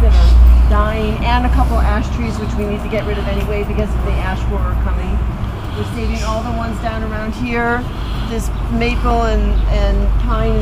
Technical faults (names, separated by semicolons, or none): CD scratch ticks